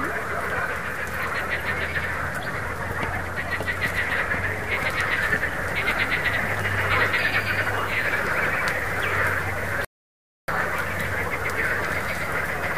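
A rebuffering stall at 9.85 s drops the sound to silence for about 0.63 s, then it resumes exactly where it stopped: nothing skipped, unlike a dropout, only time added.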